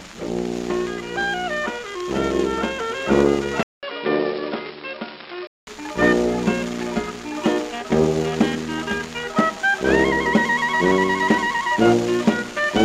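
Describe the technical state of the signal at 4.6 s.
At 4.6 s the sound is dull and a bit quieter, with nothing above 5.4 kHz, from 3.63 to 5.67 s after a 0.2 s gap: likely an input switched to a poorer device.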